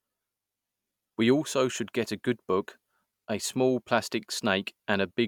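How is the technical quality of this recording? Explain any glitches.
No technical faults are audible anywhere in this recording.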